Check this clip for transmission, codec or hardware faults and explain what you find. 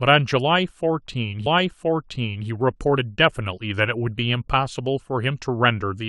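One transmission fault is audible in the speech: a stream segment repeated, from 1.45 s to 2.47 s. At that point the player fed the same chunk of the stream to the decoder twice, so about 1.02 s of speech plays a second time, with a small blip where playback jumps back. On a waveform the stretch after 1.45 s duplicates the shape of the preceding section. On a spectrogram the same pattern of harmonics and formants appears twice in a row, with a thin vertical transient marking the seam.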